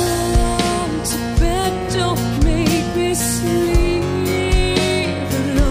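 Nothing stood out as a technical problem on listening.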